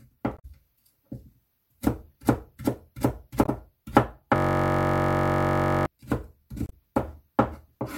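Short glitches at 0.35–0.45 s and 3.44–3.49 s are damaged data in a compressed stream: corrupted frames make the decoder lose sync. From 4.36 to 5.86 s a steady buzz at about 47 Hz replaces the sound, a system hang loop replaying one 21.33 ms slice, which fits a 1024-sample buffer. A final glitch at 6.64–6.72 s is the same stream damage.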